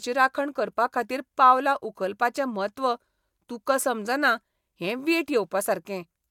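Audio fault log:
Nothing stood out on listening to this speech recording.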